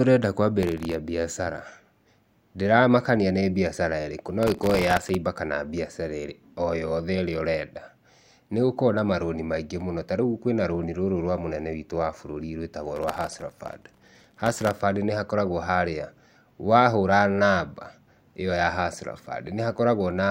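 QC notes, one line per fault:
0.63–0.94 s, 4.43–5.15 s and 12.96–14.80 s: processor overload crackle. The processor keeps missing deadlines on very short buffers, well under a millisecond each, and repeats stale audio with hard edges, so the speech gets a gritty tearing that clears once the load drops.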